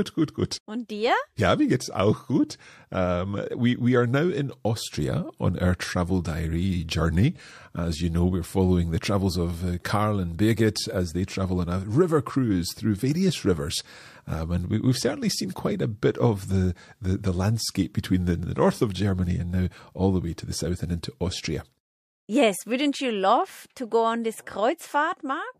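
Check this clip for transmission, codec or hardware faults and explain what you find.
One codec fault is audible: pre-echo at 2.48 s, just after "mir geht's auch". A transform codec never switched to short blocks. Its quantisation noise spread across a 36 ms window. About 14 dB of hiss leaks 15 ms ahead of a sharp attack, softening it.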